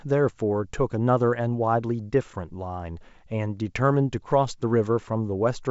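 The speech comes through G.722 wideband telephone coding at 64 kbit/s, with content reaching up to about 7.7 kHz and nothing above, and the coding leaves at most a faint trace on the sound.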